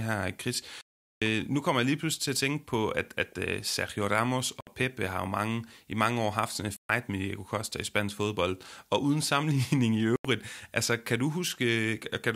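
Four short silences cut into the speech, likely Bluetooth dropouts. The first runs from 0.81 to 1.22 s, just before "nu kommer jeg lige". Others fall at 4.61 to 4.67 s, at 6.77 to 6.90 s after "år haft sådan en", and at 10.16 to 10.25 s before "altså kan du". Packets arrived too late. Sound cuts out, then resumes further on.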